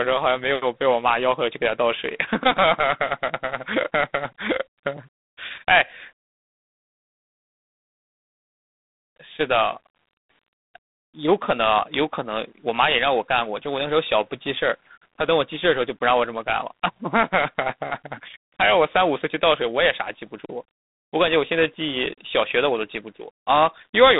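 From start to finish the speech runs through G.726 ADPCM, squeezed into a telephone band of roughly 150 Hz to 3.7 kHz with nothing above 3.8 kHz. A plain, rasping hiss rides along with the voice, rising and falling with it, which fits a 24 kbit/s setting.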